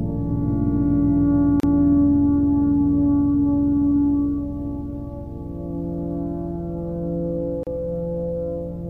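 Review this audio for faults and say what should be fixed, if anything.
Separately encoded pieces were joined without trimming the encoder's start-up delay and last-frame padding, leaving a gap at a join of encoded pieces. The sound drops out from 1.60 to 1.63 s (about 33 ms) and again from 7.63 to 7.67 s (about 34 ms), six seconds apart, suggesting 6-second segments. Each silence has smeared edges, then the sound resumes where it stopped. Trimming each piece's encoder delay and padding before joining would prevent it.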